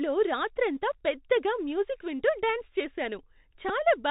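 A speech recording carrying the Bluetooth CVSD headset codec throughout: narrowband, nothing above 4 kHz, scratchy sibilants and granular hiss, consistent with 64 kbps CVSD. A Bluetooth headset packet repeat gives a small tick at 0.75 s, just before "పెద్దగా మ్యూజిక్ వింటూ డ్యాన్స్", from about 3.8 ms re-decoded. At 3.69 to 3.71 s a short buzz near 267 Hz covers roughly 11 ms of lost audio, which fits three consecutive repeated packets.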